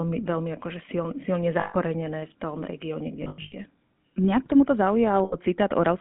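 The whole clip has been through the GSM full-rate codec. The line sits between about 150 Hz and 3.5 kHz, and the gravelly, buzzy grain that fits 13 kbps full-rate GSM is plainly audible. That grain comes from the codec rebuilding the voice from a vocal-tract model fed by a sparse, evenly spaced pulse train. Thinning the excitation like that is what gives it the rasp.

There are lost GSM frames at three spots. From 1.60 to 1.75 s, just after "veľmi akože silne silne" and before "v tom regióne kde", about 140 ms drops out. The decoder keeps reusing the last good frame, so you hear a brief metallic ring in place of the sound. After "v tom regióne kde", between 3.24 and 3.54 s, losses totalling about 220 ms are scattered across 280 ms. The longest gap is around a tenth of a second, which gives a stuttery, ringing patch. The last one comes at 5.24 to 5.36 s, after "k tomuto", and is a short 80 ms smear of the same kind.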